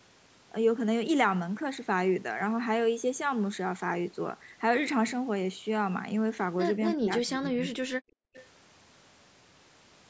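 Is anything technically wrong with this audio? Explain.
Yes, there are three problems, all clustered in the last few seconds of this speech clip.

From 6.94 to 7.78 s the talker's speech sinks and partly breaks up, falling by roughly 25 dB for about 0.7 s of that stretch. This is speech suppressed in double talk. The likely cause is that both ends of the call spoke at once, and the echo canceller, unable to tell the near talker from loudspeaker echo, turned everything down together.

Between 8.06 and 8.34 s the room sound underneath drops out, falling by about 40 dB for around 0.3 s before coming back. This is background gated by the echo canceller: while the far side's audio was playing through the loudspeaker, the canceller clamped the microphone hard and took the ambience with it, releasing only once it judged the loudspeaker quiet.

Right after that, from 8.34 to 8.47 s, a faint, delayed scrap of voice slips through, sitting around 25 dB below the main speech and trailing its source by 334 ms. 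This is an echo leak, likely from a loudspeaker at one end whose echo canceller failed to remove all of what its microphone picked up, so a residue was sent back down the line. The audio stops at 8 kHz, which is expected from the call's microphone processing.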